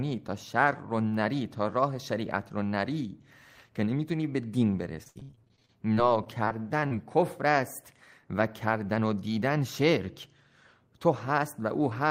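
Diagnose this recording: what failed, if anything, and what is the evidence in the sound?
The network stage failed, with repeated packet loss (robotic sound) from 5.03 to 6.93 s. The speech turns choppy, consistent with about nineteen separate dropouts. Roughly 424 ms is patched by stretching the last good sound, and another 340 ms is simply missing, the longest hole being 78 ms. About 22% of the stretch is concealed. On a spectrogram, frozen, smeared harmonic bands sit between hard vertical edges. The waveform shows abrupt near-silent notches.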